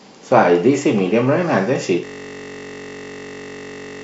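At 2.05 s a system hang loop takes over until the end: playback froze while the hardware kept replaying one 21.33 ms slice, which fits a 1024-sample buffer. It's a steady 46.9 Hz buzz, with flat, evenly spaced harmonic lines on a spectrogram and an identical repeating cell in the waveform.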